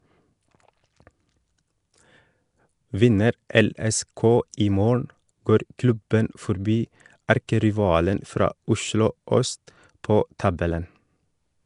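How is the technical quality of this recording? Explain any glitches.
The recording is plainly degraded by low-rate codec damage throughout, with four brief pre-echo smears on sharp onsets.

Nellymoser compression, throughout: the speech carries a rough, hissy halo and a smeared, underwater quality, and nothing is present above 10.6 kHz. The cause is likely the Nellymoser Asao codec from Flash, which codes short blocks with a fixed, small bit budget. Weak bands get no bits and are filled with noise. The result fits a bitrate around 44 kbps.

Pre-echo occurs at 3.49 s, at 4.52 s just before "i morgen går klubben", at 7.28 s between "morgen går klubben forbi" and "erkerivalen fra", and at 10.39 s. Each is spread over about 10 to 12 ms. The transform codec spreads its quantisation noise across the whole block, so noise sized for a loud attack also fills the quiet moment ahead of it. Each onset is preceded by a short hiss and sounds softened.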